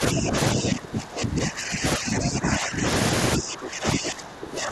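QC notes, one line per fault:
0.0 to 0.36 s, speech suppressed in double talk: the start dips by about 10 dB, likely an echo canceller ducking the near talker while the far side speaks.
0.53 to 2.86 s, speech suppressed in double talk: most of this stretch sinks, by about 15 dB at worst, likely as the canceller treats the voice as echo.
3.36 to 4.71 s, speech suppressed in double talk: the deepest cut, about 20 dB, turns down well over a second of speech near the end.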